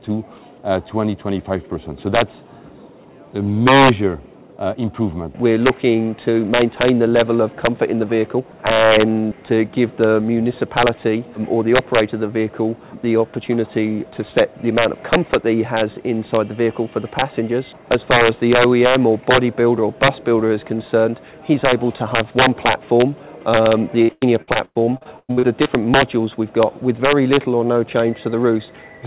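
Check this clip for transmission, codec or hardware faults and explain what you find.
Two faults stand out: an integer overflow problem running through the whole clip, and a burst of repeated packet loss near the end. It has clearly come through a narrowband call path, with nothing above 4 kHz, which fits G.711 mu-law.

The integer overflow runs throughout. The loudest peaks are being pushed about 6 dB past full scale, and instead of being limited they wrap around to the opposite sign, jumping across the whole range in one step. Only a small fraction of samples go over, around half a percent, but each one lands as a harsh, violent crack on the loud moments, much sharper and nastier than ordinary clipping.

The repeated packet loss (robotic sound) runs from 24.02 to 25.67 s. In that stretch the stream keeps losing data: twelve separate gaps, the longest 100 ms, with the receiver papering over each one by stretching the last bit of sound it had. 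About 37% of that span is patched this way, so it comes out choppy, with a robotic, stuttering quality and pieces missing.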